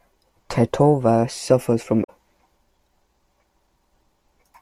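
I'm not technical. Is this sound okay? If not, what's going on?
No. Around 2.0 seconds, the clip has damaged data in a compressed stream: a small piece of the stored file was corrupted, so the playback software could not make sense of that stretch. It lost its place and had to hunt for the next readable chunk. In the speech, this comes through as a brief garbled blip or chirp lasting about a tenth of a second, ending near 2.1 seconds.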